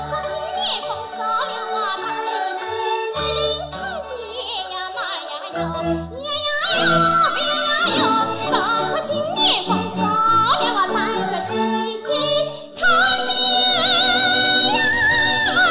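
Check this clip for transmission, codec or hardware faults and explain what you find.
Nothing here points to trouble in the transmission chain, the encoding or the playback hardware, so there's nothing to flag.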